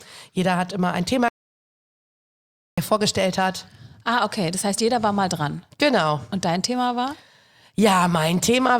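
At 1.28 s the speech cuts out mid-flow and the clip falls to silence. This is an audio dropout to silence. The gap lasts about 1.49 s. No room tone remains in it. Sound returns at 2.78 s, just before "vorgestellt hat". The likely cause is lost input, from a disconnected device, a failed link or a stray mute, while recording went on writing silence. Whatever was spoken in that stretch is gone.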